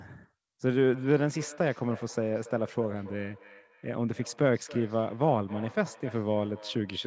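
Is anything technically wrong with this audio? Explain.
Yes. From 0.92 s to the end, the speech returns as thin, ringing repeats roughly every 0.3 s, peaking about 19 dB below the speech. This is feedback echo between two devices: one device replays the other's microphone and that sound is recaptured.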